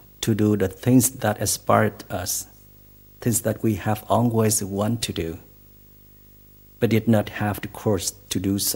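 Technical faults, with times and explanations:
Throughout, video or display buzz: a 50 Hz buzz sits under the speech with a gritty hash riding on top of it, and there's a thin whine way up at 15.6 kHz too. That's a screen or video cable leaking into the audio. The buzz tracks the picture's field rate and the whine is the line-scan rate. It's fairly low, roughly 30 dB below the speech, but it's steady.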